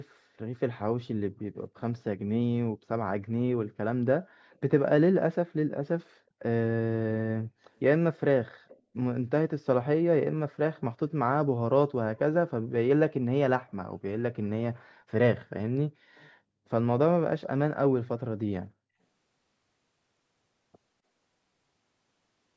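Echo leak appears in this speech at 1.77–1.81, 4.51–4.59, 8.68–8.80, 10.77–10.81 and 16.15–16.30 s: brief, faint copies of the voice trailing it by about 260 ms, with the one near 8.7 s noticeably stronger than the rest. The likely cause is a far end on loudspeaker whose echo canceller let short fragments of the picked-up voice slip through and return down the line.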